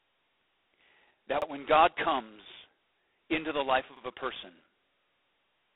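A harsh, rasping hiss rides on the speech from start to finish, swelling and fading with its loudness, and the sound is confined to a narrow telephone band of roughly 300 Hz to 3.6 kHz, with nothing above 3.9 kHz. This is heavy G.726 ADPCM damage. The codec sends only a few bits per sample describing the difference from a predicted value, and the coarseness here points to the 16 kbit/s mode, where each sample carries just 2 bits and the quantisation error turns into that level-following rasp.

At 1.42 to 1.47 s there is a brief stutter. A second one comes at 3.97 to 4.02 s, between "into the life" and "a person". Both come from overlapping chunks. The audio was handled in 2.5 s blocks, and each new block began about 48 ms before the previous one finished, so that short stretch plays twice at each join and produces a click-like repeat at a regular spacing.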